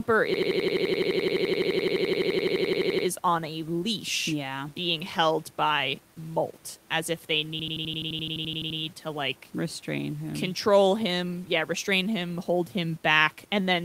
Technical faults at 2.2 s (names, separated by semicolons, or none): low bit depth without dither; system hang loop